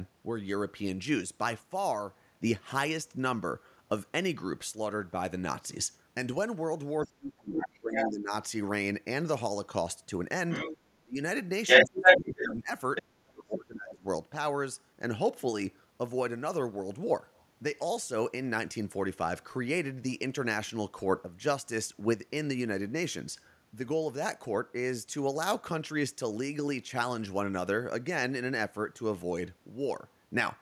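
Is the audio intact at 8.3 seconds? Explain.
No. From 7.04 to 8.32 s the speech is suppressed in double talk: the level drops by up to about 30 dB, most likely because an echo canceller could not separate this side's talk from the overlapping far-end echo and turned both down. Unlike a network dropout, the speech is turned down rather than abruptly replaced by silence or glitches.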